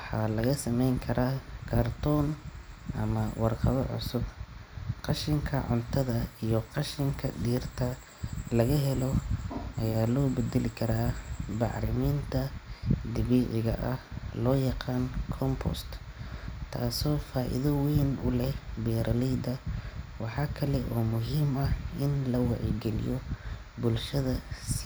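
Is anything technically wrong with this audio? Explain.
No, nothing technically wrong can be heard in this speech recording. There is no fault at any point in the clip.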